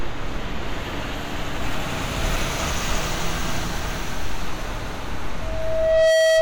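Loudspeaker feedback squeal runs from 5.41 s to 6.41 s: a microphone hears its own loudspeaker, and at 643 Hz the loop gain passes one, so that tone feeds itself, swelling over most of a second into a steady squeal about 5 dB above the sound.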